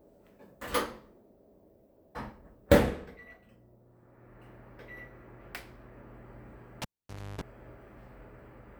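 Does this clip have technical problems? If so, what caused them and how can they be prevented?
Yes. At 6.82 s a sharp pop cuts the audio to near silence, a 50 Hz mains buzz flares for about 0.3 s, and a second pop brings the sound back at 7.41 s. This is a cable pulled and plugged in: the live lead was disconnected for roughly 0.55 s, and on reinsertion the plug tip touched before the ground, picking up hum until it seated fully. To prevent it, mute the channel or secure connectors before handling cables.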